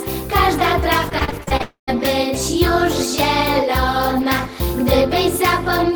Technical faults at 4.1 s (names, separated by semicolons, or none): none